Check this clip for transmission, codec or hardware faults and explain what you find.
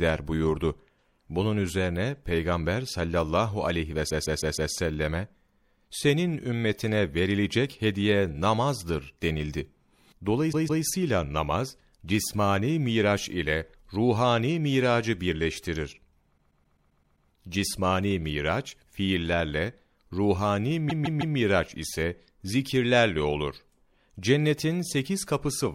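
Repeated frames occur at four points in this speech. At 4.09 s, just after "sallallahu aleyhi ve", a 157 ms block plays five times in all, running to 4.72 s. At 10.52 s, just before "namaz cismani miraç ile", a 157 ms block plays three times, to 10.83 s. At 16.37 s, after "ile ruhani miracı birleştirir", a 131 ms block plays eight times, to 17.28 s. At 20.89 s a 157 ms block plays four times, to 21.36 s. In each case a short run of compressed frames reached the decoder more than once, so the same slice of sound is replayed back to back. The result is a rapid stutter, and the clip grows longer by the repeated time, from about 0.31 s to 0.91 s at each point.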